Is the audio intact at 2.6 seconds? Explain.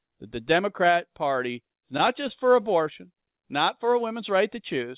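No. At 2.6 seconds the speech is inside a stretch of repeated stalls (stutter) running from 1.8 to 2.66 s. It drags and hiccups through seven brief holds, the longest 13 ms. Packets arrived late, the jitter buffer kept running dry, and the receiver stretched the last sound to cover about 74 ms in total, so nothing is lost.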